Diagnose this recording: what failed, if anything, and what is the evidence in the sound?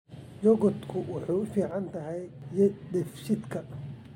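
From 1.71 s to 2.42 s the speech abruptly falls by about 6 dB, then snaps back to full level with no fade either side. The likely cause is one channel drops out, a momentary break in the analogue wiring, leaving the mono sum with only the surviving channel's half of the shared signal.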